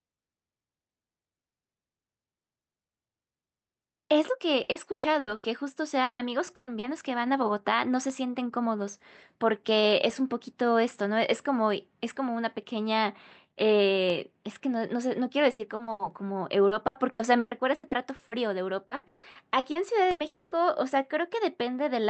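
From 4.63 to 5.46 s the speech breaks up with repeated packet loss, giving a robotic sound. Five holes fall in under a second, the longest 120 ms. Each is patched by stretching the last sound, so about 43 percent of this span is filled-in audio. The result is choppy, with pieces of speech gone.

At 6.03 s comes a long network dropout, running to 6.22 s. The sound turns into a fading buzz or hiss for a while, then about 80 ms of near silence. About 160 ms of speech never returns. The likely cause is audio arriving too late or not at all, with the receiver carrying on the last sound until it runs out.

At 6.55 to 6.70 s there is a burst of packet loss. About 120 ms is missing. The receiver holds the last sound and turns it down, so a held buzz or fading hiss stands in for the speech. Then it jumps ahead.

Just after, at 6.79 to 6.86 s, a short concealed packet loss leaves a 40 ms hole. It is smoothed over, heard as a brief smear or wobble rather than a clear gap.

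The robotic packet loss returns over a longer stretch. At 15.51 to 16.02 s there are four holes, up to 80 ms. From 16.67 to 18.34 s there are eight, up to 120 ms. From 18.87 to 20.22 s there are seven, the longest 160 ms. Between about 30 percent and almost half of each span is patched sound. The speech is choppy, with pieces missing.

A second long network dropout follows at 20.27 to 20.54 s. About 240 ms of speech is replaced by a decaying buzz or hiss before the audio resumes. This is likely the same mechanism as the first dropout: the sound stops coming through and the receiver can only extend what it last had.

Through all of this the call codec cuts off the top, with nothing above about 8 kHz.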